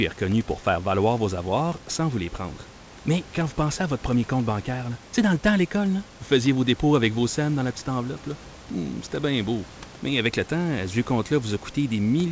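No technical faults are audible anywhere in this recording.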